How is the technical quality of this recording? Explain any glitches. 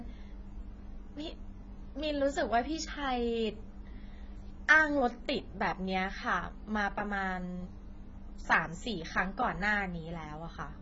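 The recording is heavily degraded by codec damage across its whole length. Throughout, nothing is heard above 7.5 kHz, and the speech sounds dull and smeared, with a warbling, fizzy texture on sibilants and held sounds. This is likely AAC compression: the encoder starved of bits lowers its cut-off and coarsely quantises or substitutes bands, which fits a very low bitrate around 16 kbps.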